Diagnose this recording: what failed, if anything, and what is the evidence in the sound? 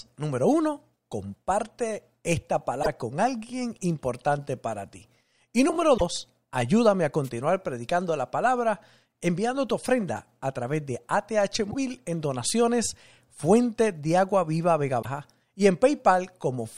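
At the codec stage, four brief chirps or holes about 50 ms long, at 2.82–2.87 s (just before "con alguien importante para"), 5.97–6.02 s, 11.70–11.75 s (before "en donaciones") and 15.01–15.05 s, with the speech jumping ahead, point to a likely broken MP3 bit reservoir: lost 24 ms frames leave following frames decoding borrowed bytes.

At the analogue radio link, a wireless microphone noise hit at 7.24–7.30 s, between "ayúdame a" and "predicando la palabra enviando", sounds like a swish of static as the FM signal fades and receiver noise swells. Unlike the reservoir faults, no speech is skipped.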